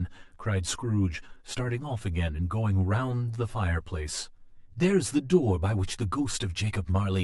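Channel delay with comb filtering runs through the whole recording. One channel arrives late by roughly 10 ms. When the two channels fold to mono, the shared speech cancels at evenly spaced frequencies. The first notch falls near 50 Hz, and further notches repeat about every 100 Hz above it. The result is a hollow, phasey tone. The voice sounds thin and boxy, as if heard through a tube, and the colouring never changes.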